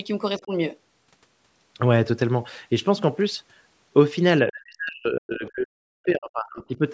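Speech suppressed in double talk, at 0.38 to 0.52 s and 4.44 to 6.81 s: the speech dips by about 15 dB, then drops out heavily, roughly 40 dB, across about two seconds, likely because an echo canceller mistook overlapping talk for loudspeaker echo.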